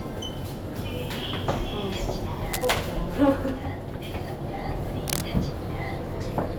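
A worn cable, connector or control was likely being disturbed, its contact resistance jumping erratically and injecting irregular bursts of noise. This cable scratch noise first appears from 2.52 to 2.70 s as a dense, rustling scrape sitting somewhat below the sound. It returns from 5.08 to 5.23 s, this time roughly as loud as the sound itself, so the scratching briefly competes with it rather than sitting underneath.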